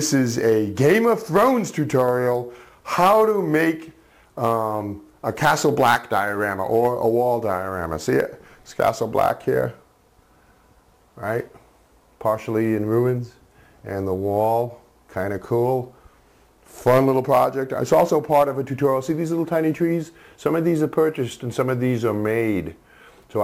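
Throughout the audio there is a gritty, inharmonic fizz that follows the louder and brighter passages, the mark of crude rate conversion done by repeating the nearest sample, which fits a 32 kHz to 44.1 kHz change. A spectrogram shows faint mirrored, inharmonic copies roughly 25 dB below the signal. Zoomed in, the waveform shows uneven stair steps.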